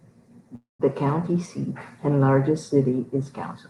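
A speech clip with a call audio freeze from 0.55 to 0.81 s. The sound stalls, the last moment is stretched into a fading buzz, and then about 160 ms of silence follows before the speech picks up exactly where it left off. That points to a likely jitter buffer running dry while packets were held up. Unlike a packet-loss dropout, nothing is cut out. Roughly a quarter second is inserted, so everything after runs 241 ms later.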